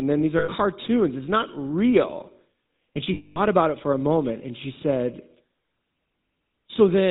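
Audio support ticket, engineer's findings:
GSM full-rate codec, whole clip: buzzy, gravelly roughness on the speech, plainly audible, and nothing above 4 kHz. The vocal-tract model is driven by a sparse, regularly spaced pulse excitation, and that's where the grit comes from. The sound fits a 13 kbps full-rate stream, so probably the GSM leg of the call path.

Lost GSM frames, 0.38 to 0.49 s, right after "then these": a short rough, metallic ring for about 0.1 s. The decoder repeats the last good frame to cover the gap. A second one at 3.14 to 3.37 s, just before "about it for a", runs about 0.22 s.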